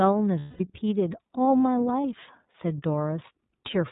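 Speech, carried through the iLBC codec for its whole length. Nothing above 4 kHz survives, so the voice is narrowband, and the coding damage is plainly audible as a rough, slightly synthetic texture. That fits iLBC's 30 ms frame mode at around 13.3 kbps, where each frame's excitation is coded independently with a modest bit budget. Lost iLBC frames cause two dropouts. From 0.39 to 0.61 s, roughly 210 ms, the decoder fills the gap by repeating the last pitch cycle mixed with noise. The result is a held, buzzy vowel that fades toward the end, which fits seven consecutive frames missing. A shorter loss at 2.01 to 2.04 s, about 30 ms and consistent with a single frame, gives a brief held, buzzy sound. After both losses the voice recovers almost immediately, because each frame decodes without depending on the one before it.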